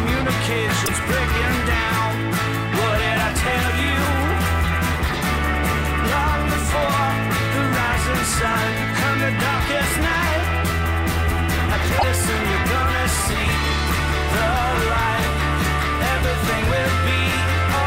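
At 0.85 to 0.89 s and again at 11.98 to 12.03 s the sound skips forward with a brief garbled glitch of about two frame lengths, which fits 26.1 ms MP3 frames. The likely cause is a broken MP3 bit reservoir: after missing frames, the decoder borrowed bytes from the wrong frame.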